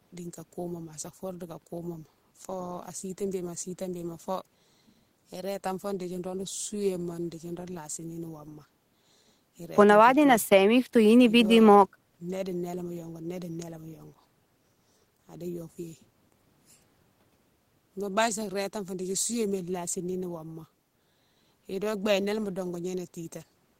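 A recording of speech, with no technical faults to point to. There is nothing here that needs a time stamp or an explanation of cause.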